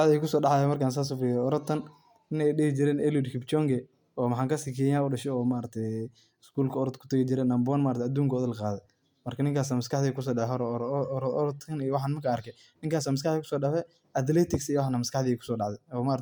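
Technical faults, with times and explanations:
10.60 s, dropped samples: one sharp click in the speech, likely from about a single missing sample, so the waveform jumps abruptly to a later value.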